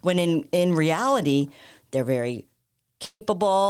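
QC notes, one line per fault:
3.05–3.23 s, long network dropout: the speech stops and the last sound carries on as a decaying buzz or hiss for about 150 ms, then drops to near silence for around 60 ms before speech resumes with roughly 160 ms of material skipped. This is likely a receiver concealing missing packets by stretching the last sound, then giving up. On a spectrogram the harmonics smear flat and fade into a blank band; the waveform shows a shrinking envelope, a gap, then an abrupt restart.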